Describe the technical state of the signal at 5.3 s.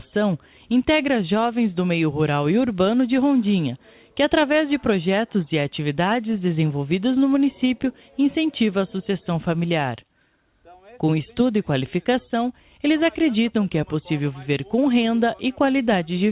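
At 5.3 s the signal is intact, with nothing wrong beyond the narrow call-path bandwidth, which has nothing above 4 kHz and fits a G.711 mu-law connection.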